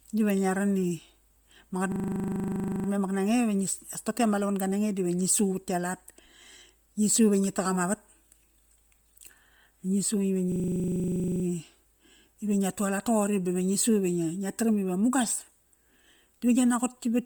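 Throughout the speech there is heavy transform-codec damage: a breathy, grainy edge where upper-spectrum detail has been replaced by noise fill. This is likely Bluetooth LC3 compression, and it fits 10 ms frames at a low 32 kbps setting.

From 1.92 to 2.88 s, and again from 10.52 to 11.44 s, a system hang loop makes a single 40 ms slice of audio repeat about two dozen times. The stall leaves the ring buffer cycling, which produces a 25 Hz machine-gun stutter, with essentially no audio lost afterwards.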